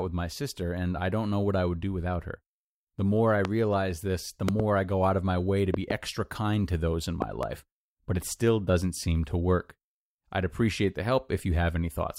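Loud pops strike the speech four times: a single pop at 3.45 to 3.47 s, then pairs of pops at 4.49 to 4.62 s, 5.74 to 5.93 s and 7.22 to 7.45 s. Each is a sharp thump peaking well above the speech, which carries on underneath. The likely cause is a sudden voltage step or pulse, from a plug, switch, static discharge or driver glitch, which the following circuitry shapes into a brief burst.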